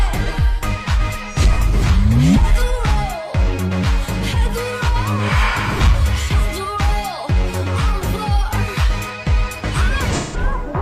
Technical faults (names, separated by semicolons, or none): AAC frame loss with concealment